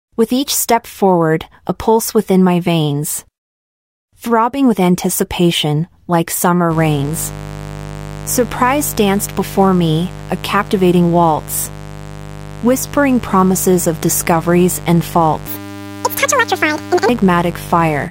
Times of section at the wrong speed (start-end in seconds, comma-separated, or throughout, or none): 15.47-17.09